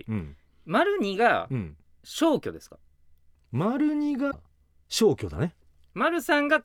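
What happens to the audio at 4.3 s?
From 4.30 to 4.34 s the speech jumps ahead and a garbled disturbance of about 44 ms replaces it. The likely cause is a broken MP3 bit reservoir: frames were lost, so the next frames borrowed bytes from the wrong frame, consistent with 26 ms frames.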